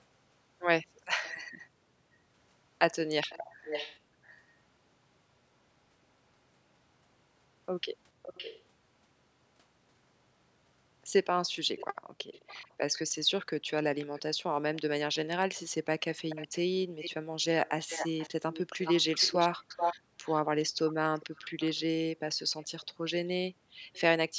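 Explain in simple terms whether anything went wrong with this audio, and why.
Echo leak: a delayed copy of the speech trails behind itself at 1.23 s, 3.2 to 4.4 s, 8.2 to 8.7 s, 11.8 to 13.0 s, 14.0 to 14.8 s, and from 16.3 to 24.0 s, lagging about half a second. It's likely a speakerphone's echo canceller letting some sound through.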